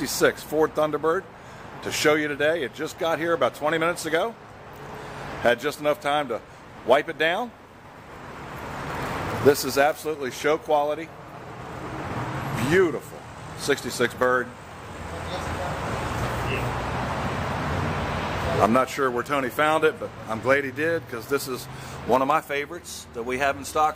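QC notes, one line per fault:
8.85–10.07 s, unreliable data bit: a fizzing crackle runs through this stretch and continues through any quieter moments. One marginal data line flips its bit in a random share of samples, and each flip adds an identical spike of about -25 dBFS.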